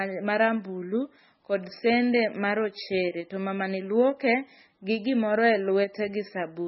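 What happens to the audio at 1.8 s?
At 1.8 s you're hearing the same thing that runs through the whole clip: heavy damage that sounds like MP3 compression at a very low bitrate, likely something around 16 kbps. The encoder has run short of bits, so it cuts everything above about 5.6 kHz and zeroes weak frequency lines, which flicker on and off between frames. That's why the speech there sounds dull, watery and swirly, with smeared attacks and chirpy, metallic s sounds.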